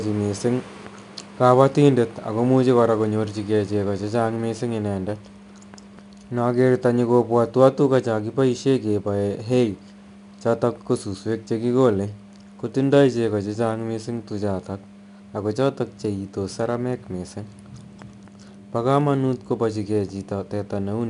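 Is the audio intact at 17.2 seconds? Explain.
No. At 17.2 seconds the speech carries a gritty hiss that rises and falls with its loudness, and the audio is dull, with nothing above about 10.6 kHz. This is 4-bit ADPCM compression, present through the whole clip. Each sample is stored as a small 4-bit step from a predicted value, so the rounding error becomes noise tied to the signal level. The missing top end points to a reduced sample rate, consistent with around 89 kbps.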